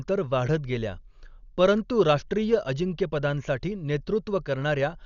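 From start to finish the speech has been squeezed through a low-bitrate encoder, most likely Dolby Digital compression, and the damage is heavy, in line with a rate around 48 kbps. Starved of bits, the coder cut the band off at about 6.9 kHz and left many frequency lines empty, filling them with noise on decoding. The result sounds dull and boxed-in, with a rough, fluttering grain clinging to the voiced sounds.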